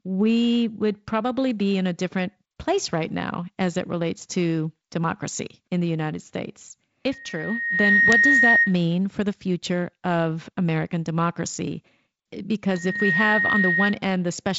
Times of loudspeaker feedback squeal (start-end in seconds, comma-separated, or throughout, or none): 7.11-8.76, 12.70-13.99